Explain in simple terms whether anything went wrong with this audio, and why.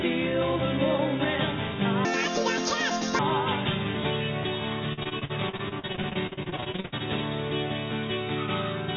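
Two things went wrong. From 2.05 to 3.19 s, a section at the wrong speed plays 1.78 times too fast. Pitch rises with it, nearly an octave, so the sound turns high and rushed. This likely comes from that part being played against the wrong clock.

From 4.93 to 7.02 s, there is repeated packet loss, which gives a robotic sound. Dozens of tiny holes appear, the longest 63 ms. Each is patched by stretching the sound just before it. About a third of this stretch is patched filler, so it sounds choppy.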